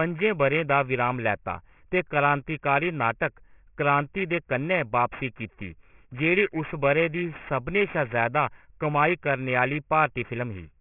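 Throughout, the audio was downsampled without an anti-alias filter, apparently to 6 kHz, so high frequencies fold back below 3 kHz as aliasing, leaving sibilants gritty and metallic.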